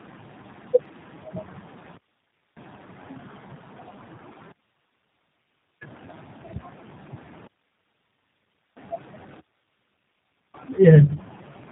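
The call passed through tandem speech coding for its whole length. It was coded with iLBC at 13.33 kbit/s, carried as G.711 A-law at 64 kbit/s, then coded again with G.729A at 8 kbit/s. That puts two low-rate speech codecs in a row, the second working on the first one's already damaged output. The speech sounds rough, muffled and warbly, with nothing above about 3.8 kHz.

A digital wireless dropout then occurs three times. Each time the link lost too much data and the receiver muted with a very short fade. The first runs from 1.97 to 2.57 s (0.6 s), the second from 4.52 to 5.82 s (1.3 s), and the third from 7.47 to 8.77 s (1.3 s). Each is a clean hole of near silence, with no noise burst on either side.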